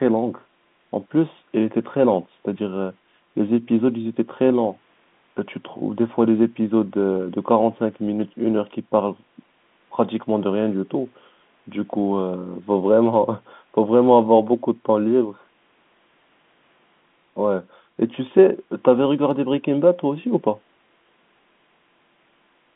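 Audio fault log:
No faults to log in this audio.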